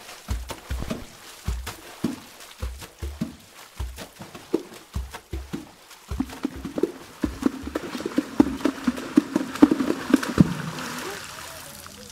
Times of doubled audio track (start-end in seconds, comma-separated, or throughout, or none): 6.15-10.41